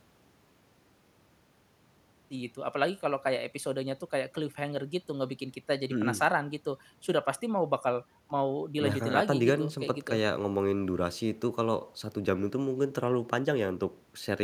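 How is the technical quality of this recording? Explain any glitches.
The technical quality of this recording is sound, and there are no glitches to explain.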